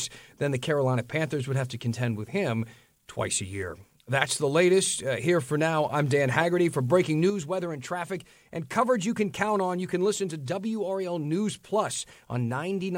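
At 7.3 seconds the speech shows a sudden gain jump: the digital gain most likely changed from one sample to the next with no ramp, as happens when a level setting or bit shift is applied instantly. The whole signal drops by about 6 dB at that point and stays there to the end of the clip. The speech and the background noise fall together, so the step is heard in the room tone as well.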